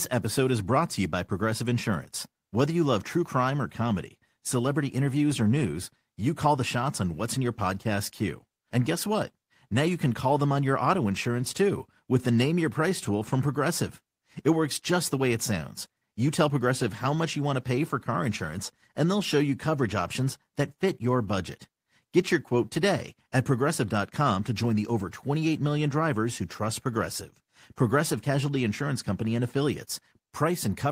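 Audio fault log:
Nothing stood out on listening to this speech recording.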